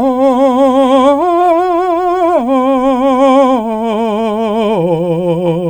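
A short piece of music, with nothing technically wrong with it.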